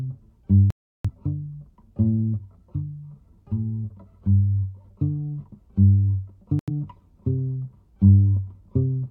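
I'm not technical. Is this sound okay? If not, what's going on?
No. There are two digital broadcast dropouts, from 0.70 to 1.10 s and from 6.59 to 6.69 s. Each time, the receiver lost good data and went silent until clean data returned. Whatever played during those gaps is gone, not just quieter.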